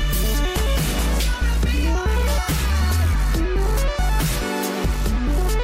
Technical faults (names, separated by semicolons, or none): none